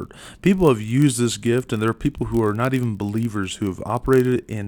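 Speech, carrying a steady buzz at 43.1 Hz from start to finish. That is a block size mismatch (padded): one stage hands over blocks slightly shorter than the next stage reads, and the leftover space in each block is zero-filled, leaving a tiny regular gap. The 43.1 Hz rate fits a 1024-sample read block. The speed change is negligible (0.999x) and pitch holds, which separates it from random buffer underruns, whose gaps fall irregularly, not at a fixed rate.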